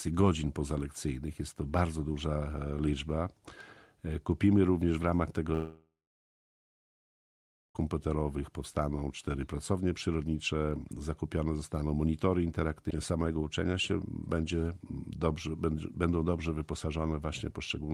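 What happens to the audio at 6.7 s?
At 6.7 s there is only silence. From 5.53 to 7.77 s a fading buzz or hiss gives way to about 1.8 s of nothing, likely a long network dropout losing audio.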